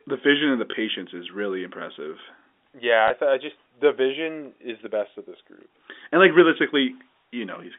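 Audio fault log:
0.72 s and 3.08 s, packet loss with last packet repeated: a small blip interrupts the speech at each point, a brief hiccup of 20 ms rather than a stutter. Each time a single packet failed to arrive, and the receiver filled the gap by playing the previous 20 ms packet again. A one-packet repeat is too short to build into a buzz at the packet rate, so it is heard as a blip within telephone-band audio running from about 250 Hz to 3.6 kHz.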